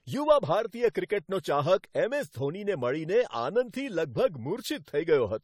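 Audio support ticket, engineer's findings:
Generation loss, throughout the speech. Swirly, hollow, smeared, attacks blurred, content stops near 19.3 kHz. Likely repeated AAC-LC 64 kbit/s re-encodes, around five passes, each requantising on a shifted frame grid. Worse than one 64 kbit/s encode would produce.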